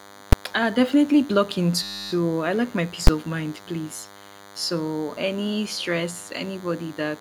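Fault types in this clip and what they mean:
DECT cordless phone buzz: A nearby DECT handset or base transmits a radio burst every 10 ms, which the audio circuitry rectifies into a thin 100 Hz buzz rich in harmonics, running under the speech for the whole clip at about 20 dB below it. A spectrogram shows evenly spaced horizontal lines at multiples of 100 Hz.
Invalid numbers at full scale: A calculation produced invalid values that were pinned to maximum amplitude, so a whole block sits flat at one extreme value, far beyond the speech peaks. At 0.33 s a 5.8 ms block gives a single bang. At 3.07 s, between "I like my peace" and "of mind please", an 11.6 ms block does the same. The waveform shows a flat block at one extreme and the spectrogram shows broadband vertical stripes.
System hang loop: The software froze while the sound hardware kept replaying its ring buffer, so one 10 ms slice of audio repeats 28 times from 1.83 to 2.11 s, between "definitely blocking" and "I like my peace", heard as a 100 Hz buzz. 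The waveform shows identical repeating cycles and the spectrogram shows 100 Hz harmonic bands.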